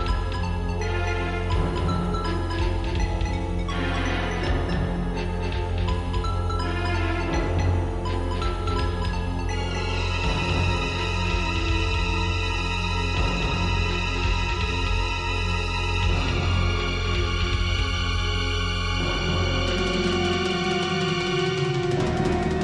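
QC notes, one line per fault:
throughout, doubled audio track: every sound is followed by a second, full-band copy at about the same loudness, trailing roughly a third of a second behind, so attacks smear into a distinct slapback that never decays or picks up any room colour. Because the copy is identical rather than reverberant, it reads as two out-of-step versions of the same audio stacked together, likely from the signal being captured a second time through a slower path.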